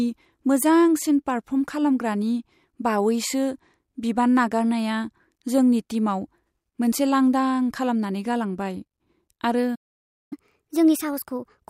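At 9.75 s the speech cuts out in a playback stall. Silence lasts about 0.56 s, until 10.33 s. The player likely ran short of data or had its thread blocked. The output simply stops mid-flow, then resumes where it left off.

From 10.33 s to the end comes catch-up at higher speed. The player resamples its backlog to regain lost time. Playback runs at 1.25 times normal speed. Pitch rises by about four semitones, so the voice sounds hurried and thin.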